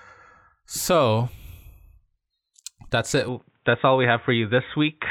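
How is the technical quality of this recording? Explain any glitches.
There's one clear problem. After "that's it", at 3.28 s the speech goes dull and boxy to the end, with nothing above 3.8 kHz. The input likely switched to a poorer device, with no gap, a similar level, and a faint new noise floor.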